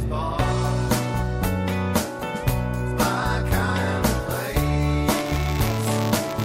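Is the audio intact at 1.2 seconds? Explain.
Yes, at 1.2 seconds the audio plays through cleanly, with no dropout, click, distortion or other fault to be heard at that moment.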